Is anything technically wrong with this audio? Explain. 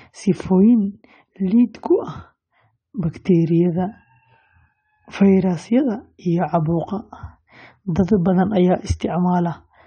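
Yes. Throughout the speech, the sound is dull and smeared, with a warbling, fizzy texture on sibilants and held vowels. This is likely AAC compression, with AAC-LC quantising each block of frequency lines so coarsely that high bands are dropped or left patchy, which fits a low bitrate of about 32 kbps. Unlike a plain low-pass filter, which only dulls the top end cleanly, the damage here shifts and sparkles over time.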